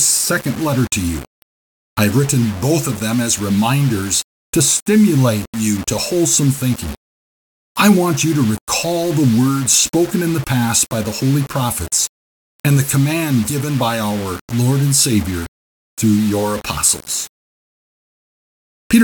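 Low bit depth without dither runs through the whole speech clip. The coarse stepping fits 5-bit rounding, likely done with no dither, so the error follows the signal. Quiet passages turn gritty and sputter between steps, with grainy distortion only about 20 dB below the speech.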